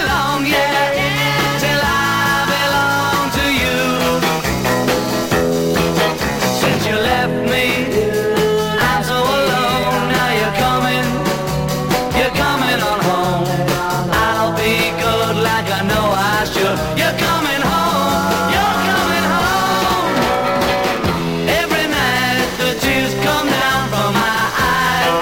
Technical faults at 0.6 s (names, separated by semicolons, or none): none